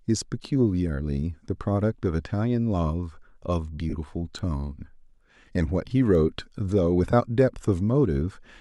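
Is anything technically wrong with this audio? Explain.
Yes. The speech has two kinds of fault, lost LE Audio frames and bit error spikes, heard over light lossy compression.

Lost LE Audio frames at 3.90–3.94 s (30 ms) and 7.11–7.13 s (20 ms): the LC3 decoder reused the last spectrum with randomised signs, producing a brief noisy smear. On a spectrogram this shows as a blurred vertical patch where the harmonics break up.

Bit error spikes at 4.39 s and 6.15 s: a flipped bit throws the sample value briefly by a power of two, giving a sharp tick. This appears as a thin full-height line on a spectrogram and a lone spike in the waveform.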